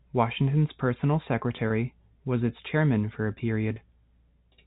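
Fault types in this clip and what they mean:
Packet loss with pitch repetition: Twice here a single chunk of audio, about 20 ms long, goes missing, which fits one lost 20 ms packet each time. The receiver bridges the hole by replaying the last pitch cycle, so you get a brief held, slightly buzzy smear rather than a gap: once at 1.68 s just before "was its chairman for", and again at 3.74 s right after "its chairman for a", both over the narrow G.711 telephone band.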